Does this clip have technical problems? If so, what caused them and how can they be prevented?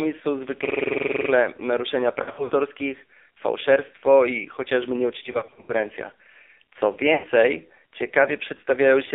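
Yes. The speech was carried through the AMR narrowband mobile codec at one of its lowest modes; the heavy damage fits a rate near 5.9 kbps. The codec rebuilds speech from a vocal-tract model excited by a few pulses per subframe, so at so few bits the voice sounds buzzy and synthetic, and the line passes only about 300 Hz to 3.6 kHz, leaving it thin and muffled. Prevention: use a wideband codec or a higher AMR mode.

There are also lost AMR speech frames. Radio errors corrupted frames, and the decoder filled each gap by repeating the last good pitch and vocal-tract settings at falling gain. From 2.22 to 2.52 s about 180 ms of speech is patched in scattered gaps, the longest 60 ms, heard as brief warbles and dips. Just after "fałszerstwo i chociażby", from 5.32 to 5.73 s, a similar scatter spreads over 0.36 s, and from 7.14 to 7.27 s a 100 ms stretch smears and sinks before the voice returns rough. 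Prevention: improve radio coverage or use stronger error protection on the link.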